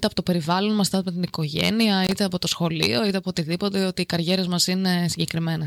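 A speech clip with a burst of loose connector crackle from 2.04 to 2.12 s, just before "από το σχολείο είτε". A worn or dirty contact is making and breaking, chopping the signal into scratchy, irregular fragments for about 80 ms. Unlike a single digital click or dropout, it is a ragged, irregular burst of crackle.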